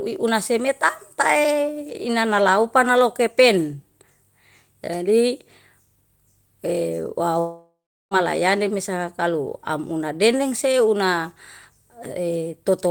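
Speech; from 7.39 to 8.14 s a fading buzz turns to silence before "mesa kalu amuna dene", likely a long network dropout, far longer than a brief packet-loss click.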